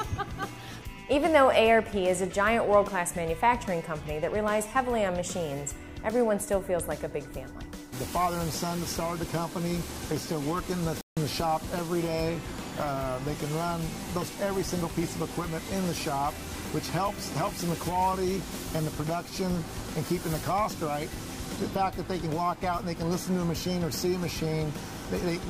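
A playback stall at 11.01 s cuts the sound off mid-flow for 0.16 s; the player likely ran out of data before resuming.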